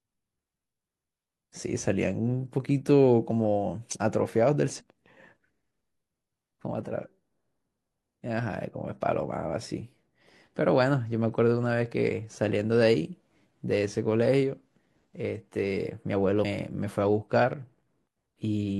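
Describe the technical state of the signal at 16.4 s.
At 16.41 s there's a short burst of damaged data in the compressed stream, lasting about 50 ms to 16.46 s. The decoder hits corrupted frames there, loses sync and hunts for the next valid frame header, so the speech gives a brief glitch.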